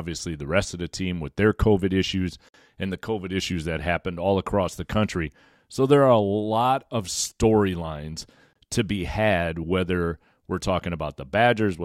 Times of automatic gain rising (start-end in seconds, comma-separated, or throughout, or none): none